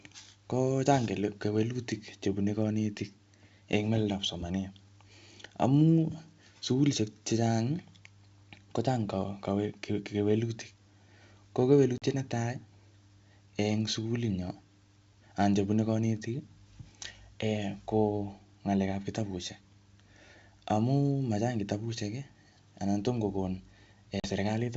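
Packet loss on an ADPCM call breaks this speech at 11.98–12.03 s and 24.20–24.28 s. About 40 ms of sound (a couple of packets) drops to silence, and the decoder's predictor and step size briefly lose track and resync.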